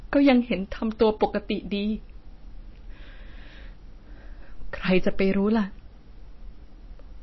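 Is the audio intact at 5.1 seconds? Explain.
No. From 4.92 to 5.09 s the speech drove a stage about 4 dB past what it could pass, so its peaks were cut flat. This is hard clipping, and those squared-off tops add harsh upper harmonics, heard as a gritty crackle on the loudest moments of this stretch.

Throughout the clip, including this moment, nothing is present above 5.8 kHz, and the remaining detail swirls and turns watery. That points to MP3 compression, likely at a low rate near 24 kbps, where the encoder cut the treble and dropped weak components frame to frame.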